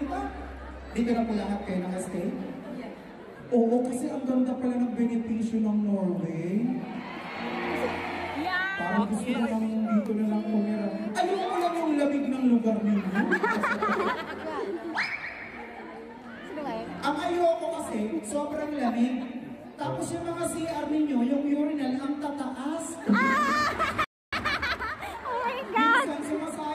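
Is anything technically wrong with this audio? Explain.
Yes. At 24.04 s the sound stops dead for about 280 ms, a playback stall, likely the player starving for data or its thread being blocked.

From 24.33 s to 26.65 s comes time-compressed catch-up. The player trims and cross-fades small pieces, running about 1.1 times fast. Pitch holds.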